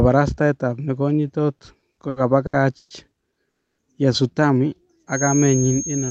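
Right after "ab nekonyitot", from 1.57 s to 2.93 s, the speech drags and hiccups: seven short holds in which the last sound is stretched, the longest lasting 130 ms. This is repeated stalls (stutter). Packets kept arriving late or more slowly than they were played out, so the jitter buffer ran dry again and again, and the receiver bridged each gap by continuing the previous sound. Together the holds add 370 ms, about 27% of that stretch, yet nothing is lost; the speech simply arrives later.

From 3.50 s to 3.81 s the audio drops into 280 ms of silence, and the speech then resumes exactly where it stopped. That is a call audio freeze. The likely cause is a 280 ms hold-up in packet delivery that emptied the jitter buffer. The concealment faded out to nothing, and when the delayed packets finally arrived, playback carried on with a gap inserted rather than anything skipped.

From 5.06 s to the end, a thin, steady whistle at 6.5 kHz sits behind the speech, about 10 dB below it and swelling and fading slowly in level. 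This is a feedback whistle, likely from a loudspeaker-to-microphone loop sitting right at the edge of feedback, so that one frequency keeps ringing without running away. It falls just inside the call path's 8 kHz upper limit, which fits the Opus codec running in wideband mode.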